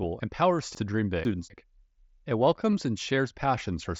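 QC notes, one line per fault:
0.75 to 1.5 s, chunks out of order: One 250 ms chunk was delivered late and played two chunks after its proper place, so the three chunks in this span run out of sequence. No audio is lost, but the order is wrong and three hard joins fall inside the span. Each join is a sudden waveform discontinuity, and the reordered pieces come across as a brief garbled, jumbled moment.
2.72 s, concealed Bluetooth headset packet loss: About 15 ms of audio went missing on the headset-to-phone link, which fits two lost frames. The receiver filled the gap by continuing the waveform with the best-matching stretch of the last 20 ms or so. Because this is a short run of two lost frames, the patch comes across as a brief buzzy tone within the mSBC wideband audio, with a small warble as the real signal resumes.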